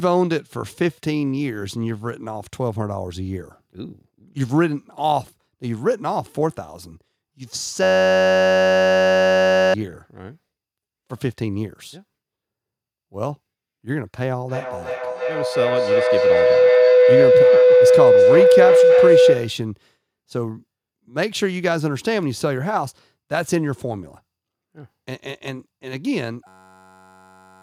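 From 7.83 to 9.74 s, a system hang loop repeats one 10.67 ms piece, fitting a 512-sample buffer. It buzzes at 93.8 Hz, and about two seconds of speech are lost. From 14.49 to 19.66 s, a feedback howl builds near 500 Hz, pulsing about every third of a second. It peaks about 5 dB above the speech. The same buzzing loop returns at 26.48 s and runs to the end.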